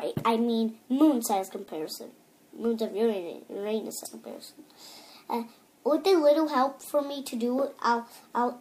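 At 4.04 s there is damaged data in the compressed stream. Some bytes in one stretch of the encoded file are wrong, so the decoder misreads those frames, loses sync and hunts for the next valid frame header. It comes through as a brief glitch.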